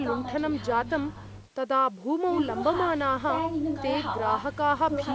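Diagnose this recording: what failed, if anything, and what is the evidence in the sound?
Nothing failed: the speech shows only the expected signature of call microphone processing, with the lowest bass trimmed by its high-pass filter and no content above 8 kHz, and no fault is audible anywhere in the chain.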